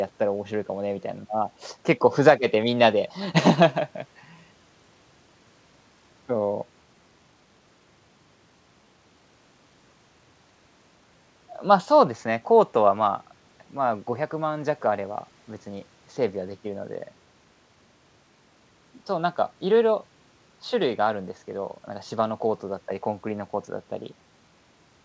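Nothing goes wrong anywhere in this recording; the speech comes through a call connection, and the only thing you'd notice is that the top end stops at about 8 kHz, which is just what a wideband call codec does.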